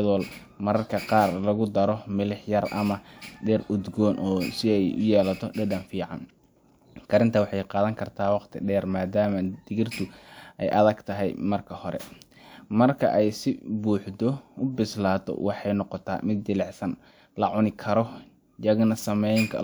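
No technical faults are audible.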